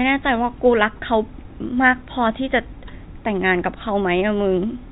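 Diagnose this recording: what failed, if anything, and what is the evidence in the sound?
Nothing's failed here; it's just speech carried over ordinary G.711 telephone coding, which is why nothing above 4 kHz comes through.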